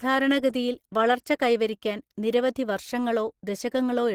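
Throughout, the speech sounds hoarse, grainy and somewhat muffled. Plainly audible Opus compression is the likely cause. The upper band seems filled with shaped noise rather than detail, which points to Opus running in its hybrid speech mode at a low rate near 16 kbps.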